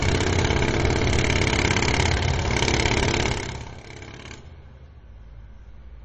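A recording of sounds with nothing above about 8.3 kHz and a plainly watery, swirly texture throughout, likely MP3 compression at a low bitrate, something like 32 kbps. From 3.23 to 3.84 s there's zipper noise: the level drops by about 20 dB in 2 dB steps, around twenty a second, and each step ticks audibly.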